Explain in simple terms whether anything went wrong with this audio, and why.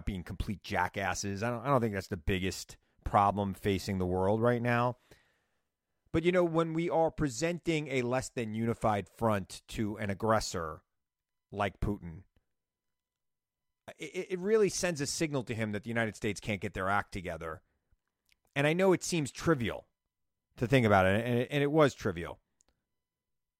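Nothing went wrong with this speech recording that a listener can hear.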